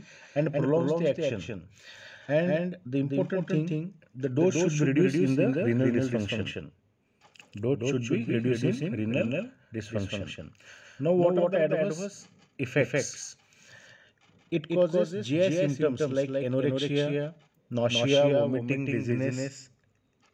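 Throughout, a doubled audio track: a full-band copy trails roughly a fifth of a second behind, about 5 dB quieter, likely from a second, slower capture path. Unlike echo, it never repeats or decays.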